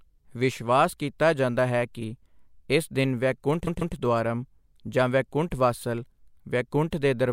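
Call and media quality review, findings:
Repeated frames at 3.66–3.95 s, after "ਇਸ ਦਿਨ ਵੈਕੁੰਠ": a 144 ms speech chunk replays twice, stutter, adds 288 ms. Encoder or transport resending frames.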